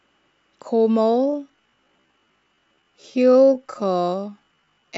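Speech, with a time-stretched section from 1.00 s to the end at 4.98 s: pace abruptly slows to 0.56× and drags, yet pitch stays put, unlike a sample-rate slowdown. Likely software stretching.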